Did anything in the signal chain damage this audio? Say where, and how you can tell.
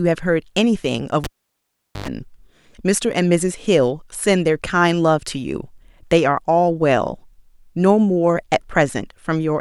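Yes: a live cable was pulled and plugged in at the analogue wiring, giving a pop at 1.24 s, 0.79 s of near silence, a 0.10 s burst of 50 Hz mains buzz, and a return pop by 2.08 s.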